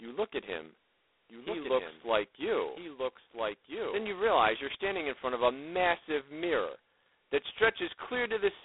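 Throughout, the speech is confined to a telephone band of roughly 300 Hz to 3.6 kHz, with nothing above 3.9 kHz, and carries heavy G.726 ADPCM damage. The coarse difference coding leaves a harsh, rasping hiss that rises and falls with the speech level, which fits the 16 kbit/s mode.

From 1.30 s to 4.08 s there is a doubled audio track. A full-band copy about 5 dB quieter trails the original by about one and a half seconds, most likely because a second, slower capture path was mixed in. Unlike a room echo, it has no decay or reverberant colour, and it starts and stops abruptly.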